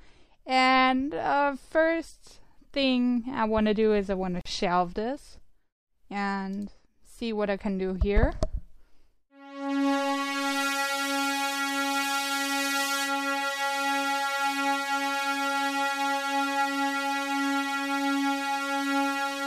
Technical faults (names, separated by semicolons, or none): gap at a join of encoded pieces